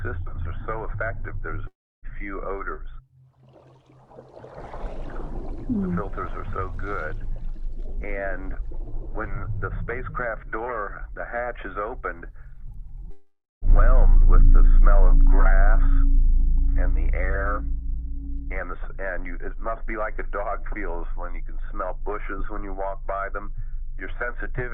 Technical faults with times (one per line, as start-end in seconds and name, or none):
1.67-2.06 long network dropout
13.11-13.65 long network dropout